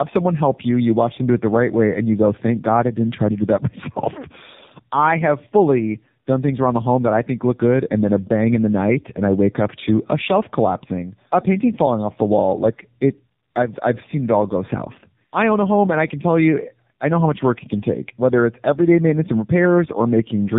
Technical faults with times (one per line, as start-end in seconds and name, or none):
0.00-20.58 tandem speech coding